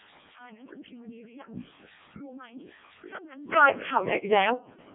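From start to finish, the speech passes through a Codec 2 vocoder. No waveform survives. The voice is rebuilt from pitch, voicing and envelope alone, so it sounds robotic and buzzy. The heavy smearing fits the 700 bit/s mode. Sound sits between 150 Hz and 3.5 kHz, with nothing above 3.7 kHz.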